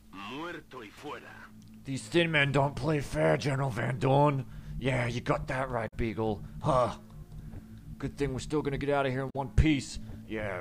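Damaged data in a compressed stream breaks this audio twice: corrupted bytes make the decoder misread frames, lose sync and hunt for the next frame header, leaving a brief disturbance of about 70 ms from 5.87 to 5.93 s and again from 9.29 to 9.36 s.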